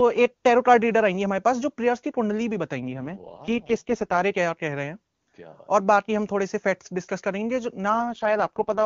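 From 2.81 to 4.22 s and again from 7.90 s to the end, an AMR rate drop makes the speech rough and synthetic, fitting a fall from about 23.85 to 6.6 kbit/s. Unlike packet loss or bandwidth switching, there's no gap and the band doesn't narrow.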